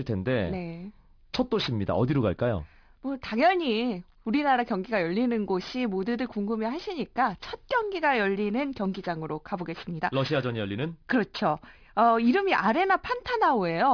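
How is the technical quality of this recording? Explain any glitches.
The technical quality is compromised by aliasing, present for the whole clip. The speech sounds like it was resampled to a much lower rate, which fits a drop to about 11 kHz, without a proper filter first. Energy above the new 5.5 kHz limit did not vanish. It folded back below 5.5 kHz at wrong pitches. Sibilants turn gritty and metallic. The folded content sits roughly 20 dB under the speech, and the top end stops abruptly near 5.5 kHz.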